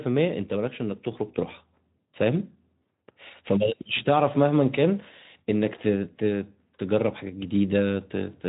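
No faults found in the speech; the Speex path shows only as a band limit near 3.8 kHz and a light coding texture that fits a mid-rate setting around 15 kbps.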